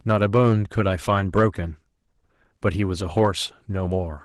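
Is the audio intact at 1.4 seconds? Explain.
No. The peaks there are hit by hard clipping, from about 1.36 to 1.46 s. The signal runs roughly 2 dB past what the stage can pass, so the tops get sliced flat. That throws extra harmonics high up, and you hear it as a brief crackle on the loudest bits.

That same moment also carries the Opus voice compression that runs through the whole clip. It's plainly audible: slightly hoarse and a bit robotic. That fits a low rate of around 16 kbps, with the linear-prediction layer below 8 kHz and a thin transform layer on top.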